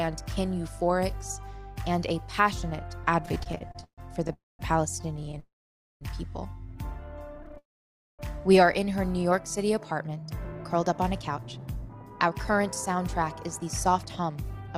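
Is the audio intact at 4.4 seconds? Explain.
No. At 4.4 s the audio is inside repeated stalls (stutter), which run from 3.23 to 5.38 s. The jitter buffer kept running empty, producing 22 brief gaps, the longest 138 ms. Each gap was bridged by continuing the last sound, so the audio drags and stutters.

Overlapping that moment is a call audio freeze from 4.33 to 4.61 s. Unlike the short repeated stutters, this is one long 263 ms hold: the continued sound fades and goes silent for 210 ms of it, likely because packets were held up in transit.

Nothing is missing in either fault. Time is inserted, and the audio resumes where it stopped.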